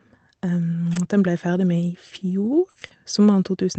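From 0.93 to 3.55 s, scattered short gaps: about four gaps from lost packets, the longest around 40 ms, patched by repeating prior sound, heard as brief ticks and smears, visible as smeared, repeated spectrogram frames.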